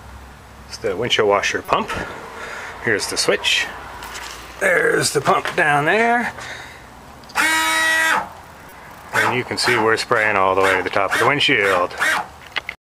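At 1.65 s a short chirp cuts through the audio for about 34 ms, and at 8.69 s a fainter blip of the same length follows. Both are a corrupt frame decoded: damaged bits in the compressed stream were played as if valid, so misread gains and codes threw energy onto the wrong frequencies for a few frames. The first peaks near about -15 dBFS, the second around -25 dBFS. Unlike concealed packet loss, nothing is smeared. Instead, a brief burst is added.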